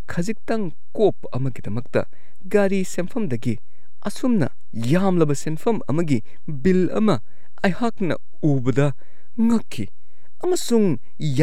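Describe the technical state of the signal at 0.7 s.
At 0.7 s the speech carries a DC offset, present across the whole clip rather than at this moment alone. The entire waveform sits shifted off zero by a constant of about -21 dBFS, eating into headroom on one side and showing as steady energy at 0 Hz. Unlike mains hum or low rumble, which oscillate and can be heard as a tone or throb, this shift has no frequency and makes no sound.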